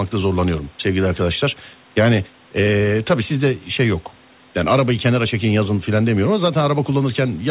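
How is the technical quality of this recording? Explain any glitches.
The recording has no glitches to explain in its technical quality.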